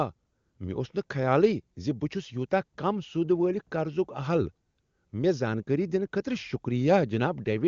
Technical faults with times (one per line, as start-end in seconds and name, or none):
none